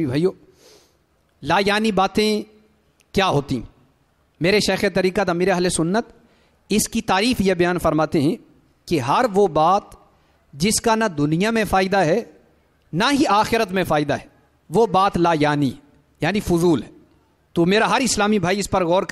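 A faint hiss and roughness runs through the whole audio, swelling with loud, bright passages and disappearing in silence. This is sample clock jitter: timing wobble of a microsecond or two, leaving an error about 40 dB below the signal.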